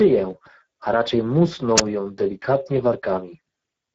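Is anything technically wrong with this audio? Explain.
Yes, two faults are audible. Throughout, Speex codec damage is plain. The speech sounds noisy and hoarse, with nothing above 7.7 kHz, which fits a low Speex setting near 10 kbps. From 1.76 to 1.82 s there is a wireless microphone squelch dropout. A faded radio signal trips the receiver's mute, so hiss rises, the sound briefly vanishes, then returns.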